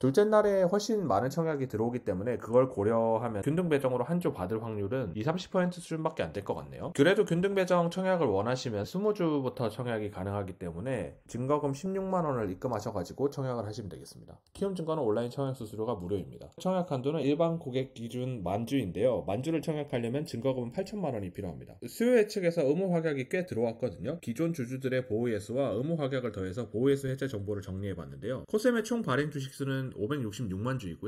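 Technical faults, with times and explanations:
Throughout, channels drifting apart: the left and right sides seem to be running on separate clocks that disagree by a few tens of parts per million, so the gap between them creeps up to under a millisecond. Fold it to mono and the comb notches sweep slowly, giving that gentle flanging swirl.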